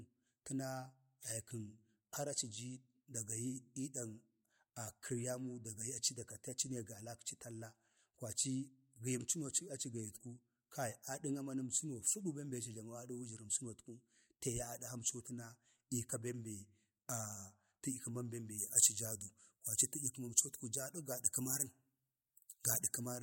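Speech that turns thin and bright from 18.58 s to the end at 23.22 s, where pre-emphasis was left on: the treble lift suits a 50 µs FM curve with no matching de-emphasis, leaving about 10 dB more at 10 kHz than at 1 kHz. Unlike harsh sibilance or a narrow presence boost, the rise is a smooth shelf climbing from around 3 kHz, so the whole upper range brightens together and sibilants stand out.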